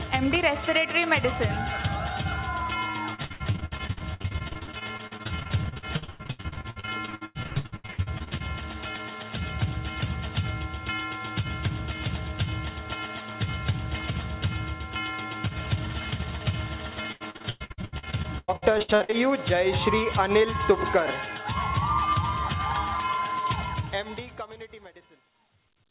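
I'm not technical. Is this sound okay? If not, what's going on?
No, there are two problems.

From 3.14 to 8.42 s, and again from 17.12 to 19.14 s, there is repeated packet loss (robotic sound). Small chunks of audio never arrived. Each hole was patched by stretching the sound just before it. Nearly half of each stretch is patched, so it sounds choppy.

The ending has truncation distortion on a fade. The fade-out starts around 23.6 s. From 23.59 s to the end, the volume change was done too coarsely. As the sound gets quieter, it turns gritty. From 24.29 s it is at its worst.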